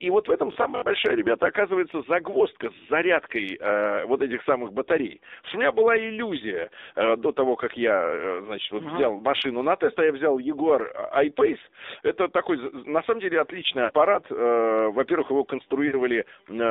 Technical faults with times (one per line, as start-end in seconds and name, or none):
0.00-16.70 AMR narrowband mobile codec
0.52-0.92 robotic sound from repeated short buffers
13.84-13.92 lost AMR speech frames
15.88-15.95 lost AMR speech frames